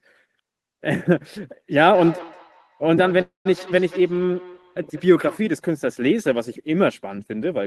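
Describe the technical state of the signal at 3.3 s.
At 3.3 s the audio is inside a call audio freeze running from 3.21 to 3.47 s. The last sound is stretched into a fading buzz, then about 140 ms of silence, before speech resumes with nothing lost, only delayed by about 0.24 s. The likely cause is held-up packets emptying the jitter buffer. On a spectrogram this shows as a smeared, static band thinning into a blank column.

Underneath, a feedback echo between two devices spans 1.90 to 5.44 s. Sound returns roughly every fifth of a second, at about 18 dB below the speech, thinner and ringing. The waveform shows decaying copies trailing each burst.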